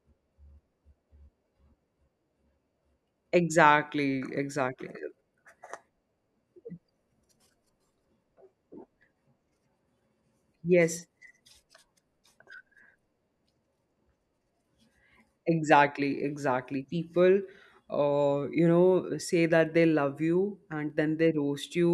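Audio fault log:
No faults are heard in this speech clip. There is nothing to list.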